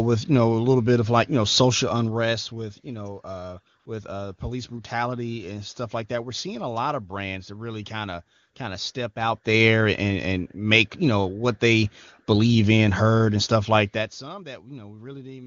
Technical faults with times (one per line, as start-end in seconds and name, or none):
3.79-3.85 AMR comfort noise